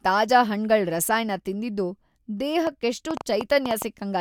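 A spoken-word recording with uneven ticking from 2.67 to 3.83 s: roughly seven sharp, similar clicks at about 6.1 per second, standing well above the speech. This train of clicks likely comes from electrical interference or a faulty connection or power supply injecting repeated pulses.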